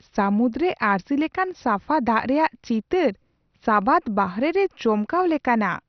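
From start to finish the speech sounds dull and gurgling, with a granular roughness. Nothing is heard above 6.2 kHz. Upper bands flicker in and out. The likely cause is heavy MP2 compression starved of bits, which fits a bitrate near 48 kbps.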